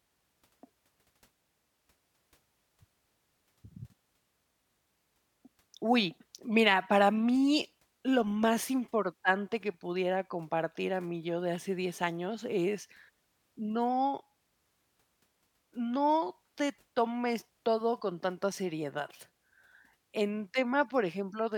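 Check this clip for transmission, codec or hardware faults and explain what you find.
Listening through the whole speech recording turns up no faults. There is nothing in it that calls for further explanation.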